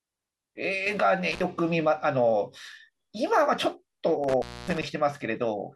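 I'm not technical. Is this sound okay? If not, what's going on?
No. An intermittent contact, a loose cable or plug briefly losing connection, makes the speech drop out with crackles at about 1.32 s and again at 4.24 to 4.86 s.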